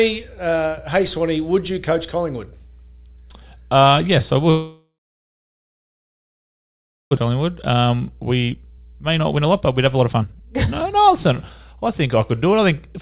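A speech recording carried over a narrowband call path, with nothing above 4 kHz, which fits G.711 mu-law at 64 kbps. A steady low drone runs under the whole clip. This is mains hum at 60 Hz, sitting roughly 25 dB below the speech. It is the kind of tone a ground loop or a nearby transformer leaks into the signal from the power line. Right after "yes I", at 4.5 s, the speech breaks off into a brief fading buzz and then near-silence for about 2.2 s. It resumes at 7.19 s with roughly 1.6 s of speech simply gone. That is a long network dropout, likely packets that never arrived, with the receiver filling the gap by extending the last sound until it faded out. From 8.2 s to the end at 13.01 s, the speech runs noticeably hurried at 120% speed, though its pitch stays where it was. This is a jitter buffer speed-up: after the dropout left about a second of extra delay, the receiver trimmed short pitch-period slices again and again to catch up, removing around a second of audio.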